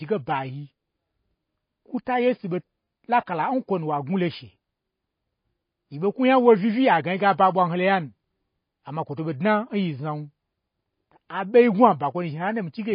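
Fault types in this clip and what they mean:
MP3 compression: The speech carries plainly audible codec damage throughout, likely from MP3 encoding at a low bitrate that points to around 24 kbps. Nothing is present above 5.1 kHz, where the encoder drops the treble outright, and weak frequency components switch on and off between frames, giving a watery, swirling texture. A simple low-pass filter would also remove the treble, but it would leave the remaining sound clean rather than unsteady.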